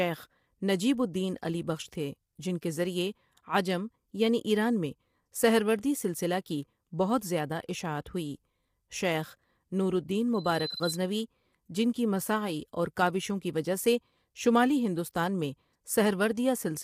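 From start to finish the speech sounds rough and grainy, which likely comes from low-delay AAC compression of the AAC-ELD kind used for video calls, at a rate around 32 kbps. Too few bits leave noise filling the gaps between harmonics, visible on a spectrogram as smeared texture between the harmonic lines.

At 10.34 s a loudspeaker feedback squeal begins. A microphone picked up the loudspeaker it fed, and the loop ran away at 4 kHz. The tone swells within about 0.4 s to roughly the level of the speech, then stops at 11.09 s. On a spectrogram it is one bright horizontal line at 4 kHz.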